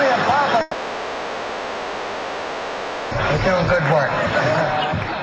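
At 0.61 s the audio stops being real and stays that way until 3.13 s, likely a long network dropout of about 2.5 s. For that whole stretch the receiver is filling in: it stretches the last bit of sound into a buzzy, hissy smear that fades. When the real audio returns at 3.13 s, it simply carries on from there, and the missing 2.5 s never comes back.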